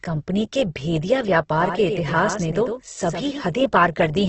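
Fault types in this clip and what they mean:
Opus compression: heavy coding damage leaves the sound grainy and rough with nothing above 8.1 kHz, likely from Opus at a very low bitrate.
Doubled audio track: from 1.58 to 3.46 s, a second copy about 5 dB quieter trails roughly a tenth of a second behind, starting and stopping abruptly, likely from a duplicated capture path.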